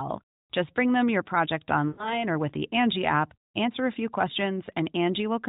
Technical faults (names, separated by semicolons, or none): lost AMR speech frames